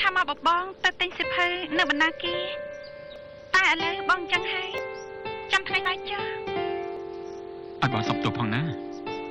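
Audio skips forward abruptly at 0.37, 3.16, 4.78, 5.85 and 6.97 s, losing roughly 50 to 150 ms each time, likely dropped buffers from overruns.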